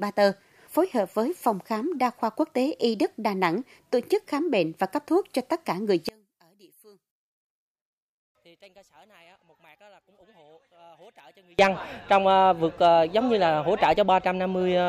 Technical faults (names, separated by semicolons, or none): one channel inverted